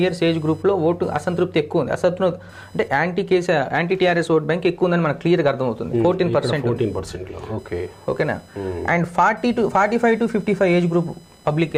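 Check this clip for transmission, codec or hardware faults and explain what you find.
One hardware fault is present: computer activity noise runs through the whole clip. It is a thin, chirping buzz with a pulse rate of roughly 1 kHz, sitting around 35 dB below the sound. Changing load on the processor, graphics card or mouse pushes current through the ground shared with the audio circuit, and that interference rides into the signal. Unlike mains hum, which holds steady at 50 or 60 Hz, this buzz shifts and flickers independently of the sound.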